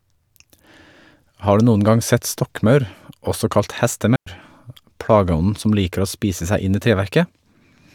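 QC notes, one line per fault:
4.16–4.27 s, digital wireless dropout: after "sett stokkmaur også kalt" the receiver mutes for about 106 ms, leaving a clean near-silent gap, flat waveform, blank spectrogram column, no noise burst.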